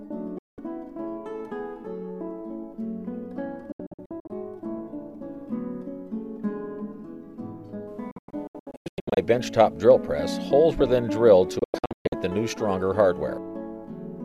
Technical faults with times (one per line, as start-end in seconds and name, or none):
0.38-0.58 digital broadcast dropout
3.72-4.30 digital broadcast dropout
8.11-9.18 digital broadcast dropout
11.59-12.13 digital broadcast dropout